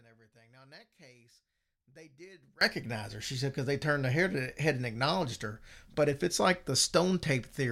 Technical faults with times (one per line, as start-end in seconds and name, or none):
0.00-2.61 one channel inverted